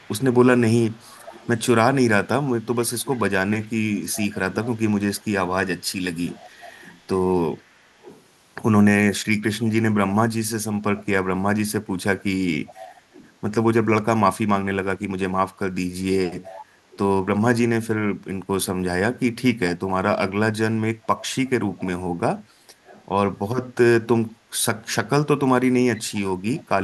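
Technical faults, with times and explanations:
0.00–8.23, 12.67–13.33, 16.26–16.98, 19.69–19.91, 21.05–21.83, 22.85–23.06 and 24.82–26.62 s: echo leak, a faint copy of the speech trailing 411 ms behind at roughly 20 to 30 dB down, likely a loudspeaker end's echo canceller letting its microphone pickup return.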